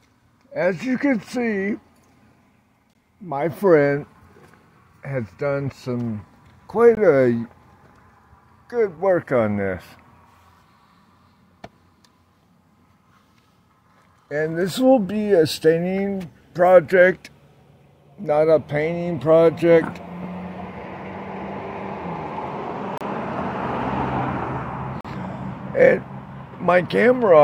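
Gaps between stream segments at 2.93, 6.95–6.97, 8.97, 22.98–23.01 and 25.01–25.05 s: segment timestamps leave holes, filled as hard-edged silences of 4–38 ms on 2-second boundaries.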